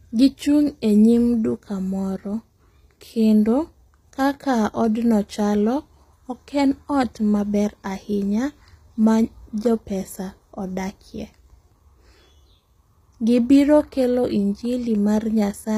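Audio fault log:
Throughout, likely HE-AAC compression. Copied lower bands rebuild the treble, so s sounds turn gritty and lispy. Nothing above 15.5 kHz, fitting about 24 kbps.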